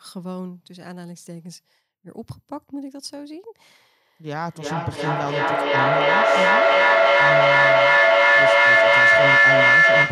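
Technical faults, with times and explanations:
4.4–10.1 s, feedback howl: a mic-to-loudspeaker loop grows each pass into a tone near 2 kHz, about 14 dB above speech, shown as a bright spectrogram band pulsing roughly every 0.3 s.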